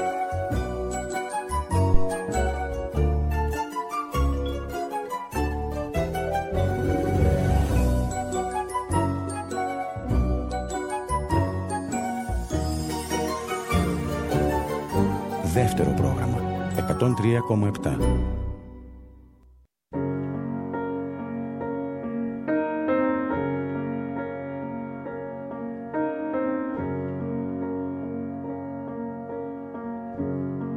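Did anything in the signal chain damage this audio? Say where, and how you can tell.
Yes: phantom power thump at analogue input, 1.94–2.12 s; the supply step through coupling capacitors gives a deep thump, about -6 dBFS, fading within 40 ms.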